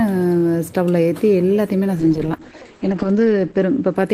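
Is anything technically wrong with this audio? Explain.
Yes. A call bitrate drop begins at 2.0 s and runs to the end. After the bandwidth estimate fell, the encoder dropped from 40 kbps to 9 kbps and narrowed its bandwidth from 20 kHz to 8 kHz. The sound turns muffled and coarse, staying at its lowest for 1.07 s.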